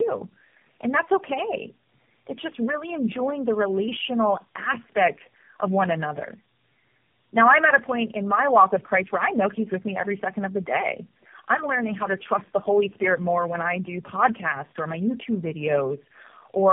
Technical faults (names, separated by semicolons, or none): tandem speech coding